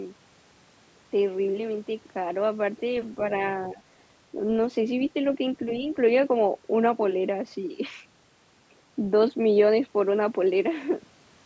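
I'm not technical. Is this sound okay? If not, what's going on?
No. Twice the speech briefly dips in level: from 3.73 to 3.81 s, the deeper of the two, and from 5.83 to 5.92 s, more mildly. Each dip lasts about a tenth of a second or less. The likely cause is speech suppressed in double talk. On a call, when both people talk at once, the echo canceller can mistake the near talker for echo from the loudspeaker and turn the microphone down, clipping bits of speech.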